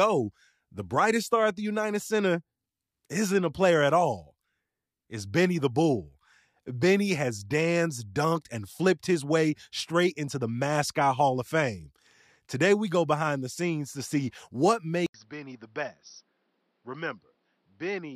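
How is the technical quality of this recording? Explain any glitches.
The recording has one clear fault near its end. At 15.06 s, after a silence of 80 ms, the speech turns dull and boxy through to the end: nothing above 5.9 kHz, about 10 dB quieter, with faint new background noise. That is likely an input switched to a poorer device. The gap plus the simultaneous shift in level, tone and noise floor sets it apart from a plain filter or codec bandwidth drop.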